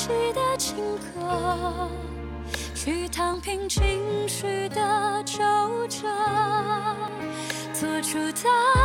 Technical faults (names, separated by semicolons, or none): dropped buffer (overrun)